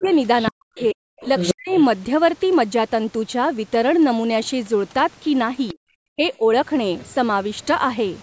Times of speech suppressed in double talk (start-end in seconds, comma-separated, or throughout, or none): 0.00-1.72, 5.74-6.44